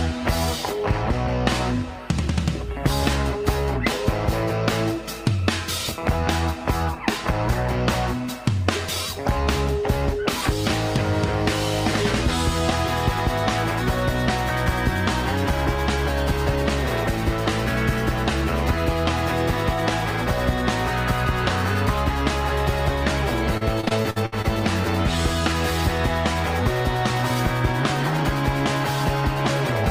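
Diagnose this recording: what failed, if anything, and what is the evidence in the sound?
Repeated packet loss (robotic sound), network stage: from 23.57 to 24.46 s, eight dropouts up to 62 ms long, patched by extending prior audio, sound choppy with pieces missing.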